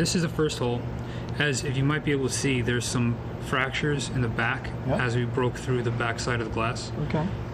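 No technical fault can be heard anywhere in the audio; the signal stays intact and continuous throughout.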